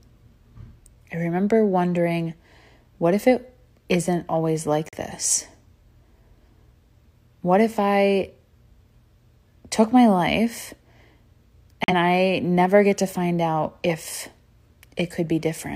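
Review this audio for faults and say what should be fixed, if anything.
Digital broadcast dropout at 4.89 to 4.97 s and 11.84 to 11.94 s. The speech mutes briefly, then resumes further on. Each gap fits one corrupted frame of about 43 ms. To prevent it, improve reception or add stronger error correction.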